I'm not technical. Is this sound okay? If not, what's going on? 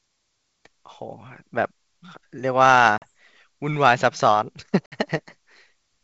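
No. There are two short dropouts from packet loss on an ADPCM call, one at 2.98 to 3.06 s and another at 4.86 to 4.97 s. Pieces of the speech, about 40 ms and then 60 ms, go missing and become hard-edged silence. When the sound comes back, the receiving end has lost track of the level and prediction the sender was using, so there's a brief click, slight roughness or a wrong volume until it catches up a moment later.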